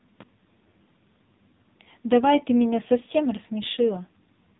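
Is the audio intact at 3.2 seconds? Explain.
No. At 3.2 seconds, as throughout, the speech carries heavy AMR narrowband mobile codec damage. Its 8 kHz sampling leaves nothing above 3.8 kHz, and its pulse-driven vocal-tract model gives a buzzy, synthetic tone that fits a low rate near 5.9 kbps. A plain low-pass filter would dull the sound without that buzz.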